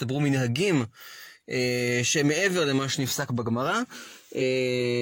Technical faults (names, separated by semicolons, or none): compressed frames skipped